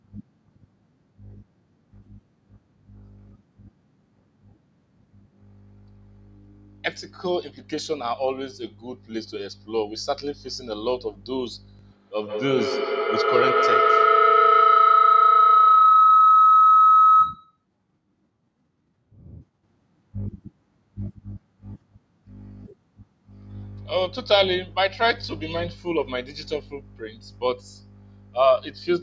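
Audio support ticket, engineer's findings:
Feedback howl, 11.86 to 17.65 s. Shrill tone near 1.5 kHz swelling over the speech, peaking about 8 dB above it, pulsing roughly every 150 ms. Probable component: two devices sharing one room on the call. Mic-to-speaker loop gains level each pass and narrows toward its favoured frequency. Pulse rate matches the round-trip delay. Stops when the loop breaks. Call mic processing intact, band limited at 8 kHz.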